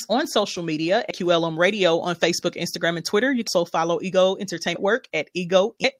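Speech that lurches forward four times: at 1.10 s just after "on social media", then at 3.47 s, 4.75 s and 5.84 s. These are compressed frames skipped. Roughly a third of a second vanishes at each of the first three jumps and about half a second at the last. The lost stretches look like whole frames missing or rejected by the decoder, consistent with 32 ms frames.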